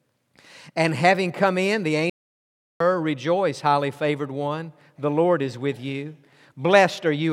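At 2.10 s, just after "having come in the", the player likely ran out of data or had its thread blocked. The result is a playback stall: the speech breaks off mid-flow into 0.71 s of silence, and sound returns at 2.80 s.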